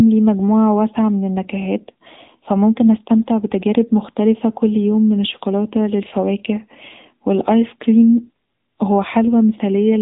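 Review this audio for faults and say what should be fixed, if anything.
The whole clip carries AMR narrowband mobile codec damage, and it's plainly audible. Nothing gets through above about 3.8 kHz, so the speech sounds boxed-in and phone-like. The codec rebuilds the voice from a vocal-tract model excited by a handful of pulses, and at this low rate, which fits the 7.95 kbps AMR-NB mode, that leaves a buzzy, synthetic edge on everything. To prevent it, record or route the call over a wideband path, or at least a higher-rate codec, rather than a narrowband mobile link.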